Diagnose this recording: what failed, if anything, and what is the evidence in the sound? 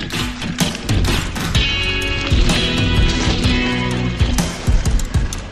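Nothing failed at any stage here: the audio runs without dropouts, clicks, distortion or level jumps, so there's no fault to diagnose.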